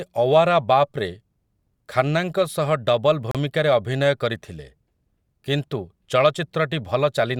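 At 3.31 s the speech drops out abruptly and returns at 3.35 s. This is a gap between stream segments. Two adjacent segments carry time stamps that fail to meet, leaving about 34 ms unaccounted for. The player fills that hole with digital silence. The edges are hard, so the dropout sounds like a brief click-framed blank. Nothing is missing from the speech itself. The material after the gap simply arrives slightly later.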